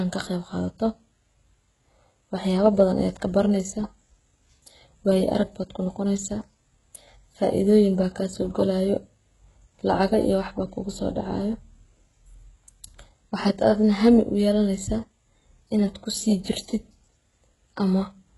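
Throughout, the speech has heavy HE-AAC compression damage, likely from a very low bitrate: s sounds turn gritty and lispy, and the spectrogram shows blocky, replicated treble ending sharply at 11.5 kHz.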